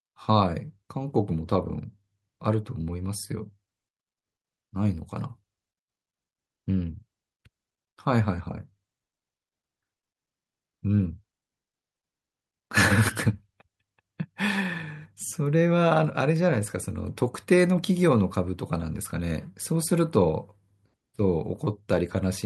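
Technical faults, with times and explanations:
No technical faults can be heard anywhere in the speech recording, and the signal stays steady and continuous with no audible disturbance at any point.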